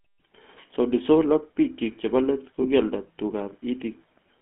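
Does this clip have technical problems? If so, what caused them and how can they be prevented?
Yes. GSM full-rate codec, throughout: the sound is squeezed into a telephone band of roughly 200 Hz to 3.4 kHz, and the codec rebuilds speech from a vocal-tract model driven by a sparse pulse train, giving a plainly audible buzzy, gravelly roughness that fits the 13 kbps full-rate mode. Prevent it by using a wideband or modern codec such as AMR-WB or Opus instead of GSM full rate.

Lost GSM frames, 2.62 to 2.65 s: a brief rough, metallic ring replaces the signal because the decoder repeated the previous good frame's settings, which fits a single lost 20 ms frame. Prevent it with a cleaner radio link, better error protection, or forward error correction on the channel.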